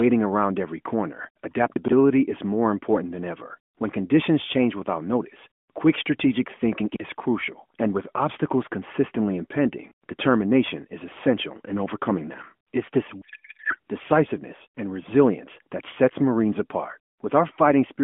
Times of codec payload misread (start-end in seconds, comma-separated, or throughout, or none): 13.22-13.78